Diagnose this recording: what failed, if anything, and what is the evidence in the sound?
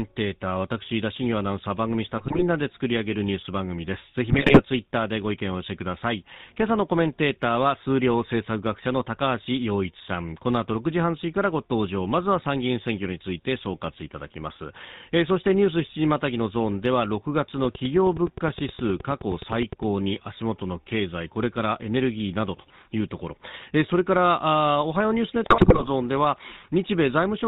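The codec stage is the GSM full-rate coder, consistent with 13 kbps full-rate encoding. It rebuilds speech from a vocal-tract model driven by a sparse pulse excitation and discards everything above 4 kHz, so the whole clip is band-limited, buzzy and gravelly.

GSM bit errors on the radio link corrupted the parameters reaching the decoder at 2.18 to 2.44 s, 4.30 to 4.61 s and 25.44 to 25.89 s. Damaged filter, pitch and gain values distort the spectrum and level, producing squawks, pops and gargling bursts.

A train of clicks runs from 17.65 to 19.84 s: about twenty similar pulses at a steady 9.6 per second, roughly 5 dB above the speech, ticking through pauses too. Interference from nearby equipment or a faulty connection or power supply is the likely cause.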